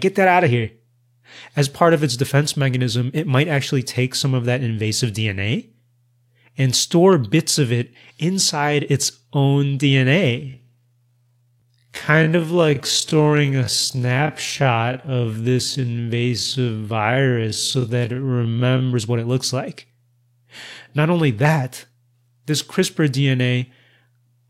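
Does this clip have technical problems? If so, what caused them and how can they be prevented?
Yes. There is a time-stretched section from 10.37 s to 18.89 s. It begins just after "it inside its own" and ends just before "what it looks like". Within it the pace suddenly drops to about 0.54 times normal speed while the pitch stays the same. The slowed speech drags. This is likely the result of software lengthening the passage by repeating short pieces to fill a set duration. To prevent it, edit to length by cutting material rather than stretching it.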